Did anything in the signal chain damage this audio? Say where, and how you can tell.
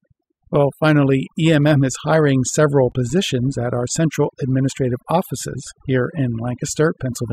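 Yes. Throughout the clip the background drops between phrases, leaving twinkling specks. This is overdone noise removal at the processing stage. A noise reduction tool set far too strong is pulling individual frequency bands down or out whenever they sit close to its noise estimate. The quiet parts of the speech fall below that threshold and are stripped away with the noise.

From 2.89 to 2.96 s there is a brief glitch, about 60 ms long. That points to damaged data in a compressed stream, in the codec or storage stage. Some bytes in the encoded file or stream were corrupted. The decoder could not read those frames correctly, lost sync and searched ahead for the next valid frame header, which produced the glitch.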